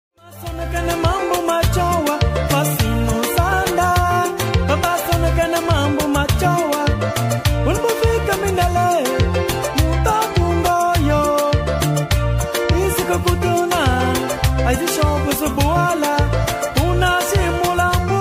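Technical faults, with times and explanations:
No technical faults are present.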